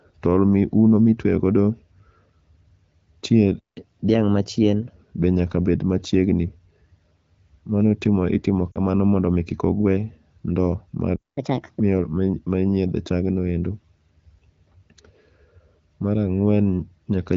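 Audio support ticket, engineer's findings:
Playback stall at 3.59 to 3.77 s (174 ms) and 11.16 to 11.37 s (213 ms). Speech output drops to silence mid-flow, then resumes. Likely cause is player buffer underrun or a blocked audio thread starving the output.

Catch-up at higher speed follows each stall. From 3.77 to 4.93 s the player resamples at 1.15x, with pitch up about two semitones. From 11.37 to 11.80 s it runs at 1.5x, with pitch up roughly a fifth. Both then drop back to normal speed.

Lost AMR speech frames at 8.72 to 8.79 s. A 40 ms dip toward near silence, which fits two consecutive 20 ms frames failing their check. The AMR-WB decoder repeats the last good pitch and spectral settings with falling gain, then recovers with a brief rough onset. The wideband codec itself carries only light coding colour.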